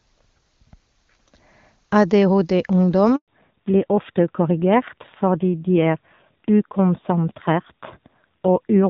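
It's a speech recording, and at 3.16 s there's a handover gap: the voice drops out for 120 ms while the call switches networks, and that stretch is simply lost. From 3.28 s to the end the call has fallen back to narrowband, with nothing above 4 kHz, so it sounds duller and rougher than the clean HD Voice opening. That fits a drop to something like 7.4 kbit/s AMR-NB.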